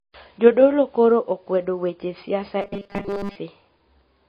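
Throughout the clip, the speech has most likely passed through heavy MP3 compression, at a bitrate that sounds to be around 24 kb/s. Starved of bits, the encoder has zeroed weaker frequency lines, which flicker on and off between frames. The result is plainly audible: speech with a watery, swirling texture and smeared consonant onsets.

From 2.62 to 3.36 s, the playback buffer likely ran dry, and the software covered the gaps by looping the last short slice of audio instead of playing new material. Most of the sound in that stretch is repeated rather than fresh. The loop imposes a fixed 200 Hz buzz, which fits a slice of about 5 ms, turning the speech into a stiff, metallic, robotic drone that only loosely follows its original contour.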